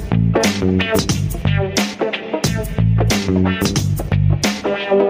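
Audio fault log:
throughout, gain pumping: the level keeps ducking hard each time something loud comes in, a swing of around 15 dB, so the level seems to breathe in and out. Loud and quiet moments sit much closer together than they should, giving a squashed, flattened feel. That's most likely the input gain set way too hot for the mic, with a fast limiter or compressor yanking it back down on every loud hit.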